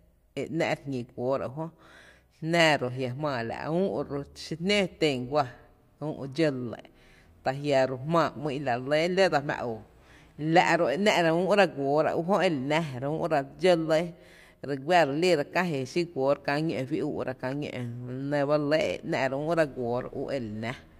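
Listening closely to the speech, nothing stood out as a technical fault at any point.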